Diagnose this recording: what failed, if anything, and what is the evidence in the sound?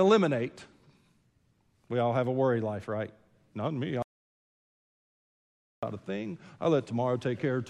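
The input path most likely lost its signal upstream of the recorder, through a disconnected device, failed link or stray mute, while silence kept being written. The result is an audio dropout to silence from 4.02 to 5.83 s: about 1.8 s of silence with no room tone, before the speech resumes at "a thing I".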